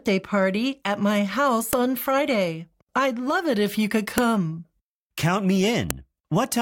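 File header played as audio at 1.73, 4.18 and 5.91 s: each is a sharp, loud click where a new piece of the stream begins. The piece's leftover WAV header bytes were decoded as sample values. They make a brief snap that cuts through the surrounding sound.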